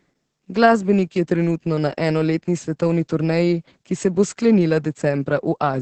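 Speech with Opus voice compression throughout: nothing above 8.5 kHz, and a hoarse, slightly robotic texture from coarse SILK coding, which fits roughly 10 kbps.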